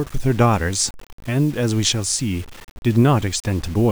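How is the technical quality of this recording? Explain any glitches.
Technical quality is poor, with one fault running through the whole speech clip. Low bit depth without dither: the audio was likely reduced to about 6 bits by plain rounding, so the error tracks the signal. Grainy distortion sits only some 25 dB below the speech, roughening quiet passages and making the softest moments sputter or drop out.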